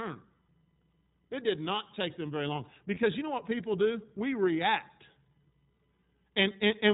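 Speech here, and the whole clip runs through the iLBC codec, with plainly audible damage. Nothing above 4 kHz gets through, so it has that boxed-in narrowband phone sound, and the voice comes out a bit rough and synthetic; iLBC rebuilds each frame's excitation on its own rather than carrying detail over from the frame before. The character fits the 30 ms frame mode at roughly 13 kbps. There's also a lost iLBC frame from 2.94 to 2.98 s. It's a short dropout that sounds like a brief held, slightly buzzy vowel, which is the decoder looping the last pitch cycle with a bit of noise mixed in to cover the hole. The gap fits a single missing 30 ms frame. Since iLBC frames don't depend on each other, the voice snaps back to normal straight after.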